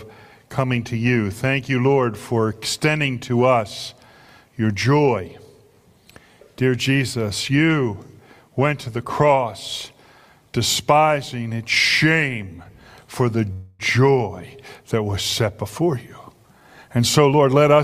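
At 13.53 to 13.82 s a call audio freeze fills 266 ms with a fading continuation of the last sound, likely from held-up packets; nothing is lost, only delay added. From 15.93 to 17.80 s a jitter buffer speed-up plays at 110% speed, same pitch, trimming about a fifth of a second of excess buffered delay.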